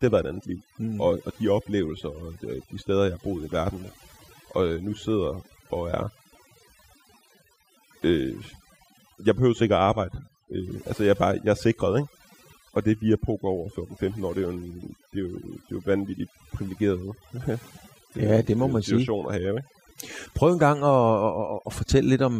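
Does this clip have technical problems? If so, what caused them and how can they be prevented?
Yes. Overdone noise removal runs throughout the speech. The reduction cuts or mutes individual frequency bands whenever they sit close to its noise estimate, so the background collapses into twinkling, warbling specks and quieter speech components vanish along with it. Prevent it by applying a gentler reduction setting.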